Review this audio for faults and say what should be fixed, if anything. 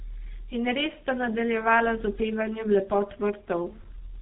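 The speech passed through a G.723.1 codec for its whole length. Its slow-updating 30 ms frame model and narrowband design leave nothing above 3.8 kHz, making it muffled and hoarse with smeared consonants, which fits a bitrate near 6 kbit/s. Route the audio through a wideband codec at a higher bitrate, or capture it before the telephony leg.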